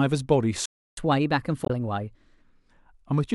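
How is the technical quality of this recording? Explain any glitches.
The recording has three clear glitches.

From 0.66 to 0.97 s, a playback stall silences the speech for about 0.31 s, likely because the player starved for data. The waveform shows a flat gap, and the spectrogram a blank band.

From 0.97 to 2.42 s, catch-up at higher speed resamples the backlog at 1.15×, raising pitch about two semitones. Harmonics shift upward on the spectrogram, then settle.

From 1.63 to 1.70 s, damaged data in the compressed stream makes the decoder lose frame sync, producing a brief glitch.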